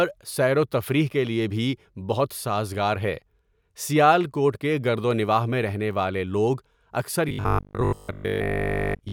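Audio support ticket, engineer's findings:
Likely audio starvation from 7.29 s to end of clip (9.12 s): new data arriving too seldom, playback looping the last short buffer, about 70% of the audio repeated rather than fresh. Repeat rate forces a fixed 50 Hz buzz, which fits a 20 ms buffer. Robotic sound from repeated short buffers: speech turns rigid and metallic, loosely tracking the syllables.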